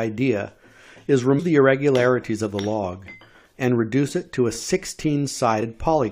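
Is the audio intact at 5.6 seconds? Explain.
No. At 5.61 s there is damaged data in a compressed stream, a very short event of about 16 ms. Part of the encoded stream was lost, zeroed or overwritten. The decoder reads those frames wrongly or discards them. It loses its place and hunts for the next valid frame header before normal decoding resumes. The result is a brief glitch that breaks the sound for an instant.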